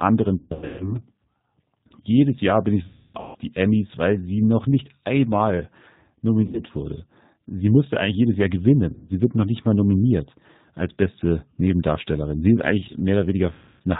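The whole recording passes through the G.729 codec at 8 kbit/s, which models the speech as a vocal tract filter plus a pitch predictor and a handful of pulses per frame instead of sending the waveform. Everything above 4 kHz is gone, and the coding damage is plainly audible: the speech has a dull, slightly rough, synthetic edge throughout.

VoIP packet loss concealed by the speech codec then hits five times. Each time, audio went missing, and the decoder filled the gap by repeating its last pitch and filter while turning the level down. This stretches the sound into a buzzy tone or coloured noise that fades, and the speech stays weak for a short while after the audio returns. From 0.38 to 1.0 s, 360 ms is lost across 420 ms, with the longest stretch 150 ms. Right after "bin ich", from 2.87 to 3.36 s, 420 ms is lost across 480 ms, including a 270 ms run. A 90 ms gap follows at 6.44 to 6.63 s, then 150 ms at 8.93 to 9.10 s just before "wird noch nicht mal". 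The last, 270 ms after "ist eigentlich", falls at 13.53 to 13.82 s.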